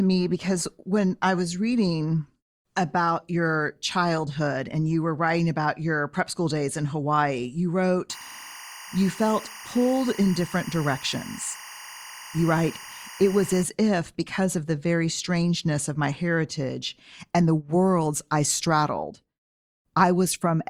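From 8.10 to 13.63 s a steady chirping warble sits behind the speech, roughly 15 dB below it, flipping between pitches near 1 and 2 kHz and stopping just before "if because of the". This is timecode bleed: linear timecode from an adjacent track or cable has leaked into the audio path. Its square-wave code alternates between those two frequencies, and the rhythm of the chirp fits 24-frame timecode.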